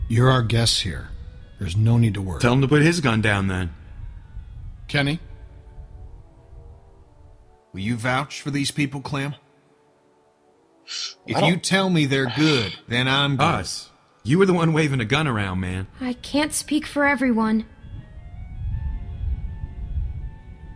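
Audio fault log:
Nothing to log here: I listened closely and didn't catch a single glitch, dropout or odd artefact anywhere in this sound.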